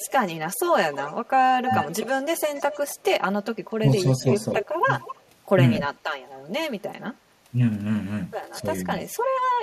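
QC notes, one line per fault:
Throughout: channel delay (comb filtering). One channel sits roughly 5 ms behind the other, and summing them to mono cancels shared content at evenly spaced frequencies starting near 100 Hz. The notches don't move, so the speech comes across hollow and phasey for the whole clip.
0.00–2.96 s, 4.62–5.22 s, 5.76–5.81 s, 8.99–9.17 s: echo leak. A delayed copy of the speech comes back about a quarter second late (248, 252, 253 and 256 ms). It's fairly strong in the opening stretch, then fainter, almost buried by the end. It's likely a far-end loudspeaker echo the canceller didn't fully remove.
3.81–4.28 s, 8.61–8.66 s: speech suppressed in double talk. The talker's level dips in short bites, about 100 ms in total in the first window, deepest around 10 dB, and a milder 5 dB dip for about 50 ms later. It's likely the echo canceller ducking both sides while they overlapped.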